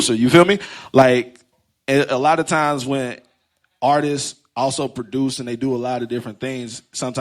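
Microphone overload, likely from the input gain being set too high, drives peaks about 4 dB past the converter's limit from 0.34 to 0.43 s and again from 0.97 to 1.02 s, flattening their tops. The loudest syllables take on a harsh, crackling edge, with around a tenth of samples clipped in the second burst.

Microphone volume stepped down, likely the call software reacting to that clipping, cuts the input by about 5 dB at 1.02 s, right after the second distorted peak, and by about 2 dB more at 2.04 s, just before "lot of times when". Speech and background both drop abruptly.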